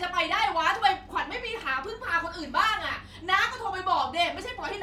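No technical faults are audible.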